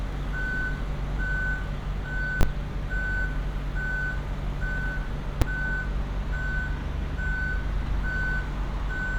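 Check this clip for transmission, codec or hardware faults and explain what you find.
Two faults of one kind, invalid numbers at full scale, at 2.41–2.43 s and 5.42 s. Invalid values were pinned at one extreme for 20 ms, then 5 ms. Each is a single loud bang, unlike clipping, which still follows the waveform.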